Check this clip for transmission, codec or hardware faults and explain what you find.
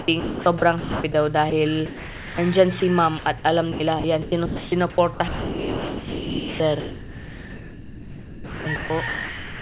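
Three faults are audible: a computer-generated buzz, and two kinds of gating by a voice detector. The sound reaches no higher than 4 kHz, which fits a G.711 telephone-band call path.

Computer activity noise runs through the whole clip as a buzz pitched around 1 kHz, about 35 dB below the sound. Processor, graphics or mouse load shifts the shared audio ground. Unlike codec noise, it tracks the computer's activity, not the sound's level.

Sound chopped by the voice detector occurs from 0.0 to 1.14 s, from 3.18 to 3.44 s, and from 3.72 s to the end. The detector is likely flicking between sending and muting, so quiet edges turn into comfort noise. That repeated switching is what separates it from a single dropout.

Sound dropped by the voice detector occurs at 1.50 s, from 1.86 to 2.38 s, and at 2.80 s. Here the detector likely judged the sound to be background and stopped sending, and steady comfort noise fills the gap until it retriggers. 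The 1.50 s and 2.80 s gaps last only 20 ms, while the middle one lasts about half a second.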